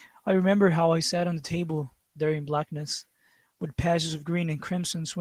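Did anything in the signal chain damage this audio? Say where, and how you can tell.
No damaging fault is audible.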